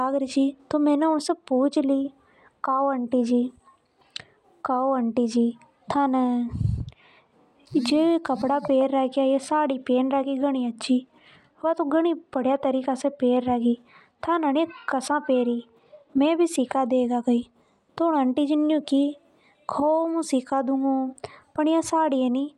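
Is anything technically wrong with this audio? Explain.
No, nothing technically wrong can be heard here.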